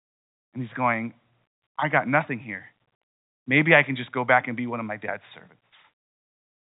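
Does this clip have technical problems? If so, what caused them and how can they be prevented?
No, there are no technical problems in this clip.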